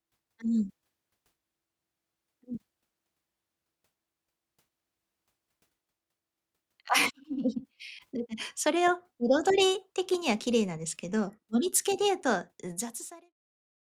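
Nothing stood out on listening to this speech clip, and the smooth fade-out toward the end, complete by about 13.35 s, sounds as an editor would intend.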